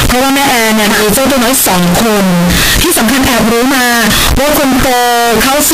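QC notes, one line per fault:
Throughout, signed and unsigned mixed up: very loud, harsh distortion with quiet passages as loud as the rest, likely from 16-bit samples read with the wrong sign convention.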